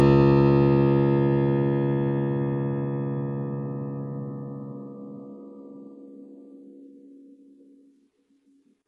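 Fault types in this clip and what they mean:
HE-AAC compression: the music's treble stays bright but sounds heavily gritty and metallic, likely because spectral band replication is rebuilding the top octaves from copied lower bands at a very low bitrate, around 12 kbps. On a spectrogram, the treble shows blocky, repeated copies of the lower bands above a sharp crossover.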